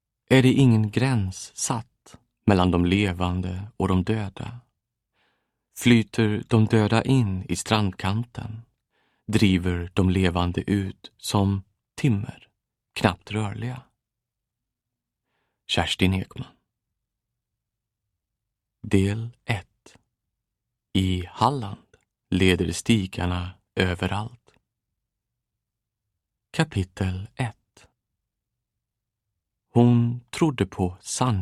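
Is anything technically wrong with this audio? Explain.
No, nothing technically wrong can be heard in this audio; the signal stays continuous and stable throughout, with no audible disruption or distortion.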